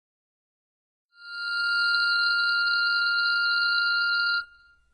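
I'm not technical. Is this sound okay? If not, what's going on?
No. The music's high end sounds gritty and metallic and stops at 10 kHz, likely from HE-AAC compression, which fakes the treble by copying lower sounds upward. The gentle fade-in that finishes around 1.89 s is a deliberate editing touch.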